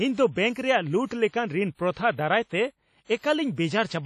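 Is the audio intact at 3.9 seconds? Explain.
No. At 3.9 s, as throughout, the sound is ringing and washy with signal-following hiss and nothing above 14 kHz, likely WMA compression at a low bitrate spreading quantisation noise across long transform blocks.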